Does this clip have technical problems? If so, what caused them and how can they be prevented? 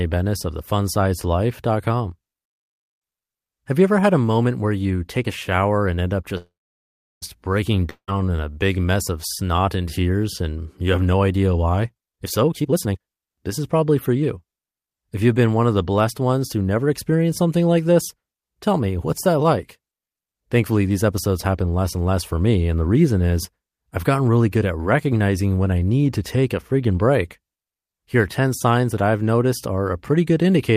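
Yes. At 6.37 s, right after "shower and end up", the speech stops and the last sound trails off as a fading buzz, then about 0.7 s of silence, until 7.24 s. This is a call audio freeze, likely from delayed packets draining the jitter buffer; nothing is lost, but about 0.84 s of delay is added. A deeper adaptive jitter buffer on a steadier connection prevents it.

From 7.90 s to 8.10 s, just before "in a big mess", a brief fading buzz and a short silence replace about 0.18 s of speech that never returns. This long network dropout likely came from packets lost in transit. Better network stability or forward error correction would prevent it.

From 11.93 s to 14.46 s, after "have no idea why", the speech runs hurried at about 133% speed with unchanged pitch. This jitter buffer speed-up trims short pitch-period pieces, around a second in total, to shed built-up delay. Smoother packet delivery avoids it.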